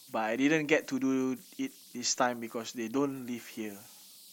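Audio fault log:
throughout: converter idle tones. A faint whistle near 4 kHz sits in the pauses between phrases, and grainy noise lies under the quieter speech, about 25 dB below the signal. Without dither, the delta-sigma converter settles into repeating bit patterns when the input is small, and those patterns produce a steady tone. A spectrogram shows a thin horizontal line around 4 kHz, clearest in the gaps. Zooming into a silent stretch of the waveform reveals a low, regular ripple instead of flat silence.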